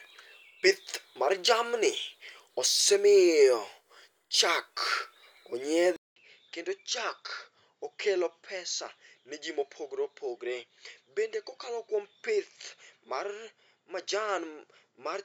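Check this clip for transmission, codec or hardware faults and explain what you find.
One fault is audible, and it runs to the end. At 5.96 s the speech drops out for about 200 ms. When it returns, it sounds duller and quieter. The level falls by roughly 10 dB, and nothing remains above 7.6 kHz. A new, faint noise floor appears, well below the speech. This is likely an input switched to a poorer device. The new device passes a narrower band and brings its own tone, level and background.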